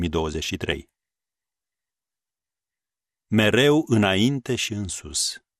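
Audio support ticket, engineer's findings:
Speech dull and gurgling throughout, upper bands flickering in and out, remaining bands grainy. Likely MP2 compression, consistent with an 80 kbps stream starving the 32 sub-bands of bits. Steady across the clip, unlike bursty reception errors, which marks it apart.

DAB burbling: brief burst at 0.71 s, longer burst 3.79 to 3.87 s. Bit errors slipping past error correction corrupt the MP2 audio data, putting short blips of noise into single sub-bands. Isolated bursts against the constant codec dullness, pointing to weak reception rather than bitrate.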